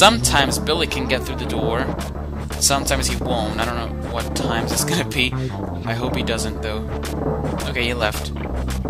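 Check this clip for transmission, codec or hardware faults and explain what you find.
No faults detected here.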